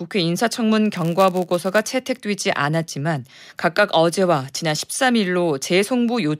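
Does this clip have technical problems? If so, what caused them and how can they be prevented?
Yes. A block size mismatch (padded) runs from 0.92 to 1.93 s: one stage hands on shorter blocks than the next expects, and zero-filled gaps in each block produce a 99.6 Hz buzz while the speech runs slightly slow, at 0.996 times normal speed, with timbre unchanged. Matching the block sizes between stages, or buffering partial blocks instead of padding them, prevents it.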